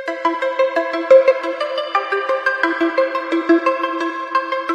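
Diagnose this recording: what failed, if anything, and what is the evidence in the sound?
Compressed frames skipped (codec): at 1.30 s the sound jumps ahead roughly 200 ms, about seven 23.2 ms frames, showing as an abrupt break in waveform and spectrogram.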